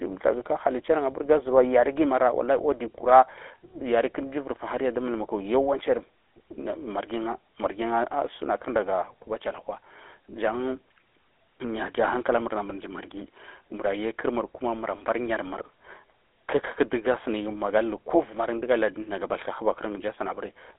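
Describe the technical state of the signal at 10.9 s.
At 10.9 s the speech carries GSM full-rate codec damage, present across the whole clip. Regular-pulse excitation gives a buzzy, gravelly roughness. The band is confined to 300 Hz to 3.5 kHz, at 13 kbps.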